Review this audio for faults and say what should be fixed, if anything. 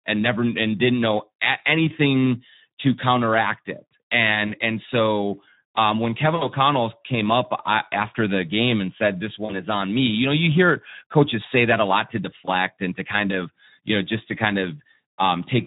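Speex codec damage runs throughout: hoarse, noisy speech that fits roughly 11 kbps. Encode at a higher Speex quality or switch to a modern codec.

VoIP packet loss concealed by the speech codec hits at 4.47–4.52 s (after "anything to counteract it"), 6.35–6.46 s, 9.45–9.60 s (before "on me you know") and 12.45–12.50 s (after "that a lot to"). The decoder stretches the last pitch and filter into a fading sound that stays weak after recovery, not a silent dropout. Adding jitter buffering or forward error correction would prevent it.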